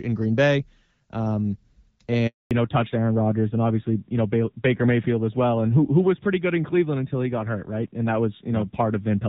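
At 2.27 s the call undergoes a handover gap: while the connection switches from one network to another, no speech frames get through. The sound dies away within a few tens of milliseconds and stays silent for 240 ms, until the new link comes up at 2.51 s. Whatever was said in that window is simply missing rather than garbled.

From 2.51 s to the end, the call shows a fallback to narrowband. Before the switch, the audio has the fuller band and light coding texture of the AMR wideband (HD Voice) codec, consistent with a mid rate around 12.65 kbit/s. After it, the link has renegotiated down to an older narrowband codec, which sounds like AMR-NB at a low rate such as 7.4 kbit/s. Nothing above 4 kHz survives, so the speech turns duller and muffled, and it picks up a rougher, grittier coding texture than before the handover.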